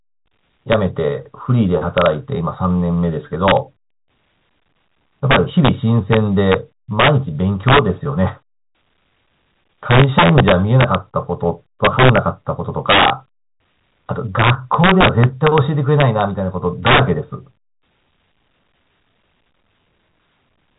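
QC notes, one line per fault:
Throughout, integer overflow: speech peaks pushed about 6 dB past full scale wrap to the opposite sign instead of being limited, so around half a percent of samples jump across the full range, producing violent cracks on loud syllables, far sharper than clipping.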